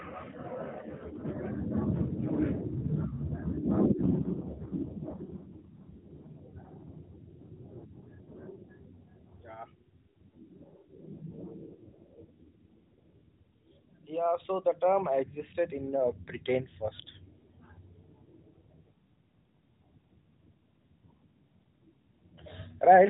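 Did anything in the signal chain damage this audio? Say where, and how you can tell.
Yes. The damage happens at the codec, under network rate control. From 4.02 to 6.37 s and again from 11.00 to 13.03 s, the speech turns buzzier and more synthetic. The band stays capped at 4 kHz and there is no gap. This is an AMR rate drop, which fits the link forcing AMR-NB from 12.2 down to 4.75 kbps.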